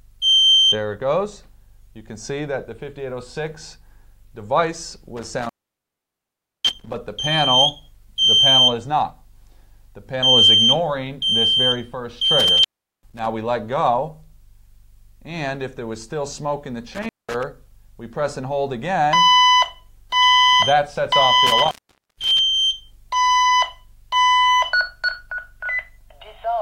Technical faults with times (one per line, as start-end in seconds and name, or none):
5.17-6.96 intermittent contact
12.40-13.26 intermittent contact
16.95-17.43 intermittent contact
21.47-22.39 intermittent contact